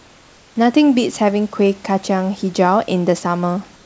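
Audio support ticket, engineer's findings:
Comfort noise in place of the background, 0.00–0.56 s: room noise at clip start turns to flat, featureless hiss, about 3 dB quieter, until speech begins. Likely receiver-side DTX fill, synthetic noise roughly shaped to background. Same at 3.76–3.85 s: tail after speech swapped for steady hiss, about 1 dB down. Real background sits about 33 dB under speech. Call path band-limited, nothing above 8 kHz, consistent with G.722.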